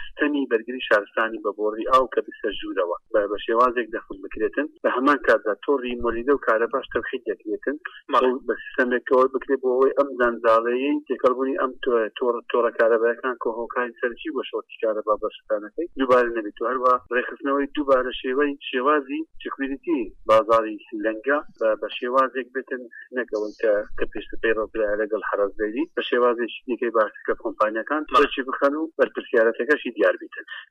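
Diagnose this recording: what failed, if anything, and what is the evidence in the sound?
Brief crackle sits on the loudest peaks across the whole recording, while quieter passages stay clean. This is hard clipping at the converter or a sample-format stage. The signal runs about 6 dB too hot, so a small fraction of peaks are cut flat, adding high harmonics.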